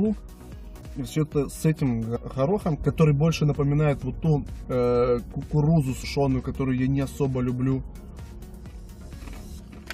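At 0.80 s the audio jumps forward. This is compressed frames skipped. Whole frames never reach the output, so about 150 ms of sound is lost. At 2.15 to 2.17 s it happens again, losing about 100 ms. At 6.03 s a smaller jump drops about 50 ms. Each gap is a multiple of one frame, which fits frames of about 23 ms.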